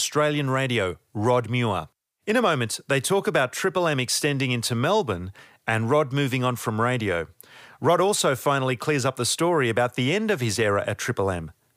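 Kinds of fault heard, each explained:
Nothing stood out on listening to this speech recording.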